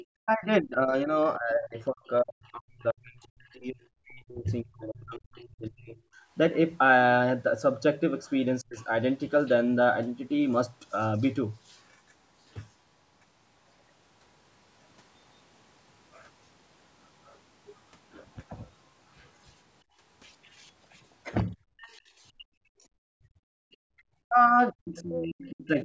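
Right from the start, 0.0 to 2.83 s, there's a faint second voice under the speech, sitting roughly 25 dB below it. That's the other side's voice leaking through: the far end was playing on a loudspeaker, and the echo canceller likely didn't scrub all of it out of the mic. It pops up again as short scraps at 8.76 to 8.85 s and 21.78 to 21.91 s.

Overlapping that, from 0.22 to 8.9 s, the talker's own speech keeps sinking and breaking up, in pieces adding up to around five seconds, with the deepest dips near 40 dB. That's speech suppressed in double talk. Both ends were likely talking at once, and the canceller, unable to tell its own talker from the loudspeaker echo, pulled the whole mic down.

From 19.84 to 23.95 s the room sound itself drops out in bursts totalling about 1.5 s, falling by about 30 dB and coming back when the canceller releases. That's background gated by the echo canceller, which clamped the mic hard while the loudspeaker was playing.

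From 21.54 s to the end the double-talk suppression returns, with about a second and a half of the speech dipped or chopped, again going down around 40 dB at worst. Throughout, the call's mic processing band-limits things, with nothing above 8 kHz.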